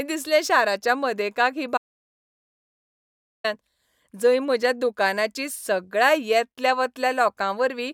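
A speech clip with one audio dropout to silence: right after "दिसलें शाराच्या मदेकाक ही", at 1.78 s, the sound cuts off abruptly and stays completely dead until 3.44 s, losing about 1.67 s of speech with no room tone underneath. The waveform shows a flat, silent stretch and the spectrogram a clean blank band. The likely cause is lost input, such as a disconnection or mute, while recording continued.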